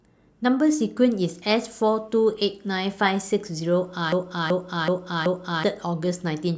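A stall in playback or streaming, likely with the last buffered fragment resent over and over, produces a broken-record loop from 4.12 to 5.64 s. A 0.38 s piece of speech repeats exactly four times back to back, and the speech that belonged there is lost.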